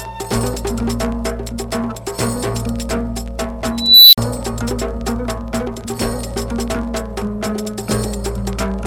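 At 3.78 s a high, piercing tone near 4 kHz bursts out of the audio. It swells over about 0.35 s into a harsh, clipped squeal. Then the output collapses into roughly 48 ms of silence, and the sound returns by 4.18 s. That pattern marks an unstable filter. A recursive filter stage had coefficients that pushed its feedback loop past stability. Its output grew without bound, clipped, overflowed, and went dead until the filter reset.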